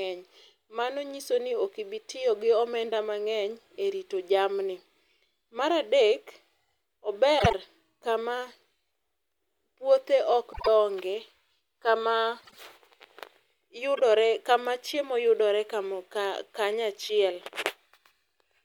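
Speech with frames out of order in four places, around 7.39–7.53 s, 10.52–10.68 s just after "puothe ok", 12.41–12.57 s, and 13.95–14.01 s right before "kama chiemo yudore". Neighbouring blocks of 52.2 ms (26.1 ms in the last) swapped places, so each spot plays back-to-front in halves, giving a garbled flutter and no lost time.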